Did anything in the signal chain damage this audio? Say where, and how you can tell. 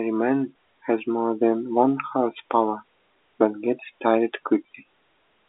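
No, the telephone path carries this speech without damage.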